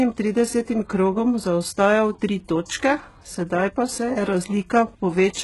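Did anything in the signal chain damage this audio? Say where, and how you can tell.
Yes, at the codec stage. Throughout the speech the treble is synthetic: s sounds turn gritty and lispy, harmonics don't line up above the crossover, and nothing remains above 11.5 kHz. This points to likely HE-AAC compression at a very low rate, near 12 kbps, rebuilding the top band by replication.

The same codec causes pre-echo from 2.65 to 2.70 s. A short hiss spreads about 43 ms ahead of a sharp attack, which sounds softened. The transform block spread its quantisation noise, sized for the loud onset, back into the quiet gap before it.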